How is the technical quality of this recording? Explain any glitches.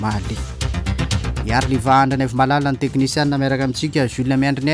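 No glitches can be heard anywhere in the recording, and the signal stays technically intact throughout.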